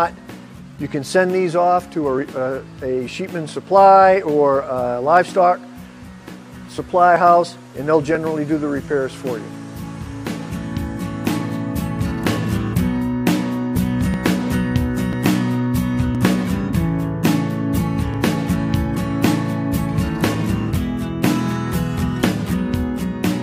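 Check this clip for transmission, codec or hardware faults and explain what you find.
Brief clicks or tiny skips occur at 2.18, 5.17, 7.16, 8.15–8.17, 14.14, 15.13–15.15, 16.15 and 18.14 s. These come from overlap between stream segments. Adjacent segments, about one second long, claimed overlapping time stamps, so the player trimmed 14 to 20 ms of real sound at each boundary and the waveform jumps.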